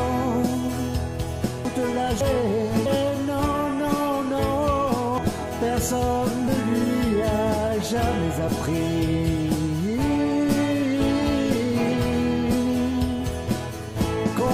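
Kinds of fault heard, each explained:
Compressed frames skipped: whole 92.9 ms frames drop out, so sound leaps ahead about 0.7 s five times; the spectrogram shows abrupt seams.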